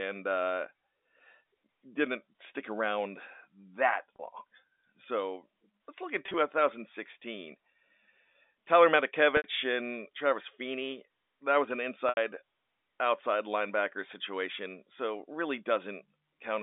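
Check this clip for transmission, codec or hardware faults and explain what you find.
Packet loss with pitch repetition in four places, over a G.711 A-law telephone line. Dropped packets, consistent with 10 ms frames, were bridged by repeating the last pitch period: 30 ms at 4.16 s, 50 ms scattered across 6.26–6.34 s, then 70 ms at 9.37–9.44 s and 80 ms at 12.09–12.17 s. The first two gaps sound like a brief held buzz; the longer ones at 9.37 s and 12.09 s fade into silence, and speech returns with a short cross-fade.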